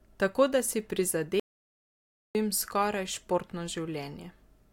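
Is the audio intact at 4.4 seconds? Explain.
Yes, the speech at 4.4 seconds plays through cleanly, with no dropout, click, distortion or other fault audible at that point.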